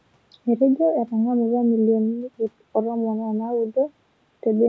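Speech recorded through a call microphone path, band-limited to nothing above 8 kHz with its lowest bass rolled off as normal for that processing, and it shows no technical faults.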